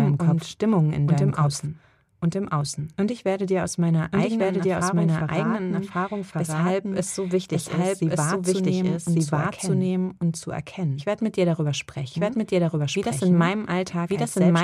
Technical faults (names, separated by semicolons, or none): doubled audio track